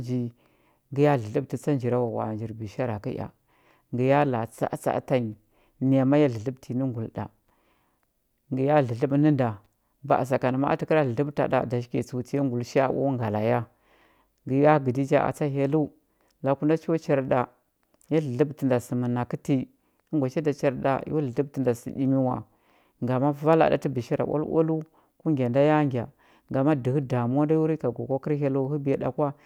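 Speech recording; no technical faults can be heard.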